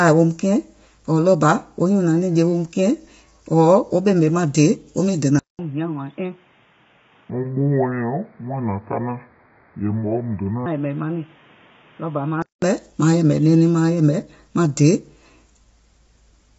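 Across the whole speech clip the sound is rough and grainy, with noise filling the gaps between voice harmonics and a lowered top band. This is most likely low-delay AAC compression of the AAC-ELD kind. Its short frames of roughly 10 ms cannot separate closely spaced pitch harmonics well. At the bitrate this damage suggests, around 24 kbps, the encoder spreads quantisation noise between them and drops the top band. The degradation is plainly audible throughout.

At 5.39 s, right after "maŋ dèè wo miŋ", the input switched to a poorer device, likely another microphone or a headset call profile. There is a silence of about 200 ms at the switch. After it the sound turns dull and boxy, with a narrower band, and roughly 10 dB quieter. A new background noise sits around 30 dB below the voice. The original input returns at 12.62 s, just before "maaŋ yɛ̀mɛ̀ nɛɛnɛŋ".

Inside that stretch, from 7.3 to 10.66 s, a section plays at the wrong speed, 0.682 times the original rate. 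Because speed and pitch are tied together, the voice drops by about seven semitones and drags noticeably, deep and slow, before snapping back to normal rate at 10.66 s. The likely cause is an editing or playback stage resampling that segment against the wrong clock.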